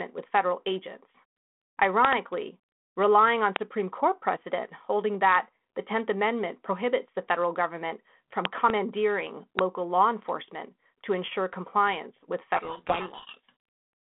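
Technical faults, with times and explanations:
2.05–2.15 s, 3.56–3.58 s, 8.45–8.72 s and 9.59–9.61 s, loud pop: sharp clicks, a double pop at 2.05 and 8.45 s and single ones at 3.56 and 9.59 s, peaking roughly 20 to 25 dB above the speech. They are likely voltage steps from a plug, switch or static discharge. Unlike codec damage, the speech carries on intact beneath each pop.
12.56–13.52 s, codec payload misread: for about a second the speech is buried in harsh, grinding distortion, because the decoder reads each G.726 code word with its bits in the wrong order. This is far coarser than the light damage of the 32 kbit/s G.726 line elsewhere.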